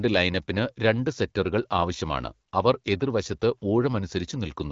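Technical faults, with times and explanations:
No technical faults are audible anywhere in this speech.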